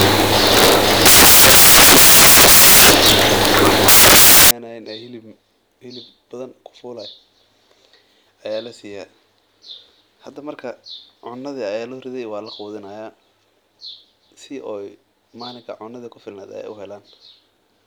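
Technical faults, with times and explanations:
0.00–4.51 s, samples built from the wrong bytes: for these first 4.51 s the sample bytes are assembled misaligned or swapped, so rapidly changing low-order bits dominate each value. The result is loud, harsh broadband noise, close to white on the louder sounds, unlike added hiss, which keeps a steady floor beneath audible speech.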